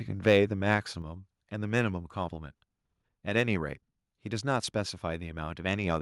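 Right at the start, from 0.27 to 0.37 s, the loudest syllable picks up a harsh, crackly edge. That's microphone overload, likely from the input volume being set too high, so the peaks run about 3 dB past what the converter can represent and get their tops sliced flat. Only a few percent of the samples in that stretch are cut off, but the flattened waveform adds that gritty buzz right on the peak.

At 1.02 s the whole level drops suddenly, speech and background together, by about 4 dB in a single step. That's the microphone volume being stepped down, likely the call software reacting to the clipping just before and cutting the device's input gain in one go rather than easing it down. You hear it as an abrupt shift to a quieter level.

It doesn't fully fix things, though. From 1.77 to 1.79 s there's another brief microphone overload, likely still too much input gain even after the cut. This one peaks about 2 dB over, with only a small fraction of samples flattened, so it's a shorter, lighter crackle than the first.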